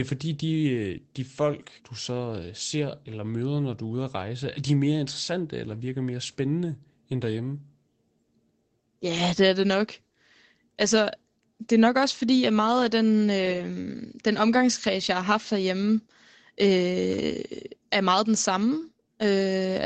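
Speech with two short rough, grainy patches but no gaps: at 12.35 s after "det er nok også", and 13.45–13.59 s after "at meget af den". These are lost packets rebuilt from error correction, played from lower-quality backup copies.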